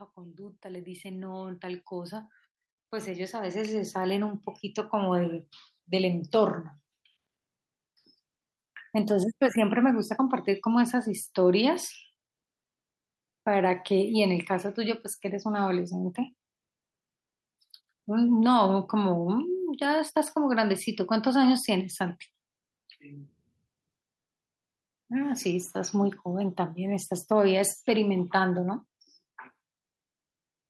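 Speech, with automatic gain rising twice near the start. From 0.14 to 2.39 s the level climbs by about 10 dB. From 3.04 to 5.36 s it climbs again by about 9 dB. Voice and background swell together, because the gain control judged the input too quiet.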